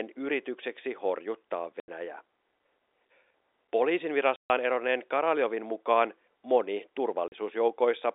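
Packet loss filled with silence cuts this telephone-band speech three times: at 1.80 to 1.88 s just after "yritykseksi horjuttaa", at 4.36 to 4.50 s, and at 7.28 to 7.32 s after "mukaan moni". Each gap is hard-edged, lasting 80, 140 and 40 ms, all multiples of 20 ms, which fits lost 20 ms packets that the receiver replaced with plain silence. The G.711 line band stops near 3.7 kHz.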